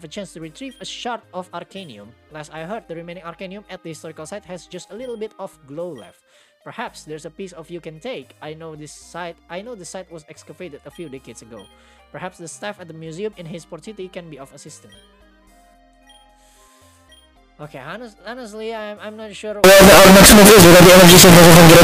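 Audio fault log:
19.64–21.84 s, signed and unsigned mixed up: The final two seconds turn into loud, harsh distortion. Quiet moments blast as loud as the rest. The likely cause is 16-bit samples read with the wrong sign convention, flipping the top bit so each zero crossing leaps across the full range.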